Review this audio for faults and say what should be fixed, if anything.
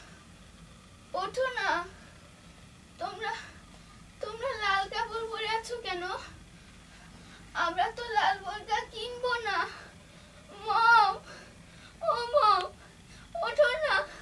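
No faults; nothing needs fixing.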